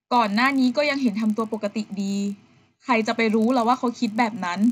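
Speech, and there's a buzz riding on it from start to finish wherever there's signal: a fault where the resampler restarted on every block. Each 20 ms chunk got converted on its own, with the filter seeing silence or wrapped samples where its neighbours should be, so every block edge picks up a small glitch. At 50 per second those glitches fuse into a buzz that only shows up when there's signal. The pattern fits a 16 kHz to 48 kHz upsample done block by block without carrying filter state across.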